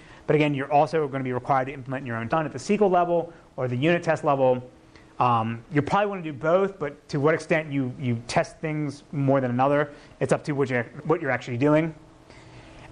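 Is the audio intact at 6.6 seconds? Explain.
No. At 6.6 seconds the sound is watery and swirly, with the top end dulled, metallic chirping on bright content and softened attacks. This runs through the whole clip, not just that moment. The likely cause is MP3 compression at a rate that fits about 64 kbps. Short of bits, the encoder cuts the treble at a fixed point and drops weak frequency lines, which flicker on and off from frame to frame.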